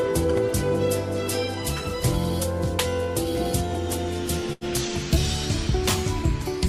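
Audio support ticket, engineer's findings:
Short stall from a late packet at 4.53–4.64 s. Sound holds unnaturally for about 84 ms, then resumes where it left off with nothing skipped. Component: receiver jitter buffer ran dry waiting on a late packet; concealment stretched the last frame. Playout delay grows by 84 ms afterward. Spectrogram shows a smeared band of frozen, repeated spectral texture, possibly faintly striated. Waveform shows a periodic, looped-looking segment before normal material returns.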